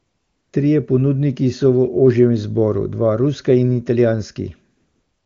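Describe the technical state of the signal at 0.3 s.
At 0.3 s you're inside a stretch of AMR comfort noise running from 0.0 to 0.53 s. The phone sent no speech frames, so the receiver plays smooth synthetic noise instead of the real background.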